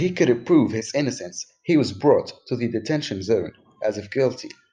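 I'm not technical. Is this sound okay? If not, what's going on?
Yes, nothing in the recording points to a technical problem with how the audio was captured or played back.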